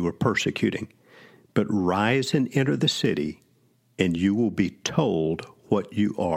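Nothing goes wrong anywhere in the speech, so there's no technical fault to point to in any part of it.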